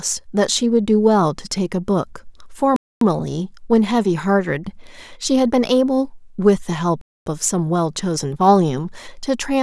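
The speech was delivered in chunks about 4 s long, and silence was left at each join, so nothing is lost but the flow breaks. This gap between chunks is heard as holes of 250 ms, from 2.76 to 3.01 s and 7.01 to 7.26 s.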